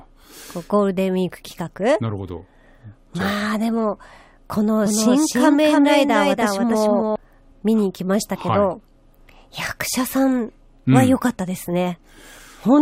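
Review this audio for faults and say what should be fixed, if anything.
A doubled audio track runs from 4.86 to 7.16 s. A full-band copy of the speech trails by roughly 300 ms, about 5 dB quieter. It starts and stops abruptly. A slower second capture path is likely mixed in. Record through a single capture path.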